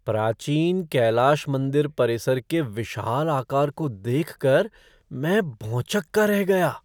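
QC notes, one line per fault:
Nothing to flag here, as no faults turn up anywhere in this speech.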